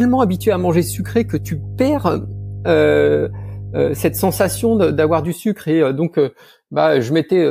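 From the very start up to about 5.26 s there's mains hum sitting under the speech, a steady low drone at 50 Hz with a few low harmonics riding on it. It's pretty prominent, only around 10 dB below the speech itself. That's what you get when a ground loop or a nearby transformer lets the power line couple straight into the signal path. The hum then cuts out cleanly for the rest of the clip.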